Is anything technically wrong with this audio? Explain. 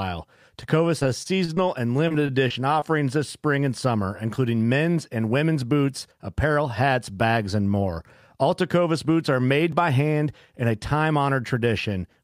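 Yes. Speech shows repeated packet loss (robotic sound) at 0.99–1.58 s and 2.08–2.84 s. Lost packets, each gap under about 30 ms, are patched by repeating prior audio, giving choppy speech, with smeared, repeated spectrogram slices. A block of digital silence at 9.72 s, a 2 ms waveform gap, is heard as a tick, showing a thin vertical line.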